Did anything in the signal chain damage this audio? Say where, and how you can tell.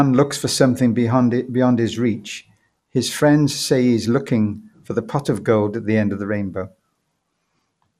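Yes: the codec stage, likely MP2 compression at around 80 kbps, dulls this speech throughout with gurgling granularity; a spectrogram shows flickering sub-bands and nothing above 14.4 kHz.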